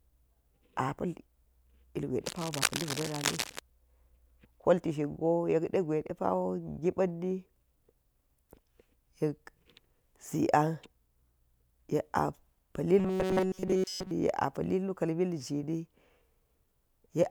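From 2.26 to 3.59 s, dense, uneven scratching and rustling sits over the speech, only about 5 dB below it. This is cable scratch noise, likely from a worn cable, connector or control moving so that its contact resistance changes rapidly.

From 12.99 to 14.11 s, the speech becomes a rigid, metallic buzz pitched at 188 Hz. This is robotic sound from repeated short buffers: audio likely arrived too seldom, so a chunk of about 5.3 ms kept looping while most of the real audio was skipped.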